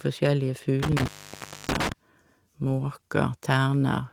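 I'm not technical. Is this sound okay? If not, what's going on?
No. From 0.83 to 1.92 s there is an intermittent contact, like a loose plug or cable. The speech cuts out for about 0.63 s, with crackle at the edges.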